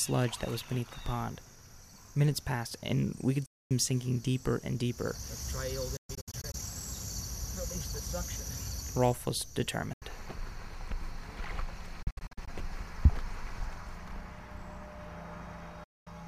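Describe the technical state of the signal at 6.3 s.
At 6.3 s the sound breaks into silent gaps between 5.97 and 6.55 s, likely a Bluetooth dropout from late packets. It resumes further on, skipping ahead rather than pausing.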